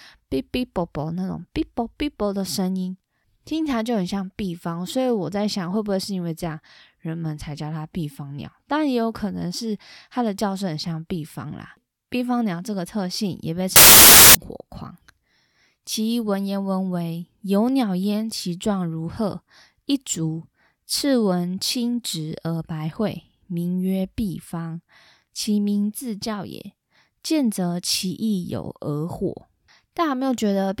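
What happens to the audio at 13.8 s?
At 13.76 s the speech gives way to loud, harsh broadband noise until 14.35 s. This is samples built from the wrong bytes. Each sample's bytes are assembled out of order or misaligned. The rapidly changing low bits then dominate, turning the sound into hiss.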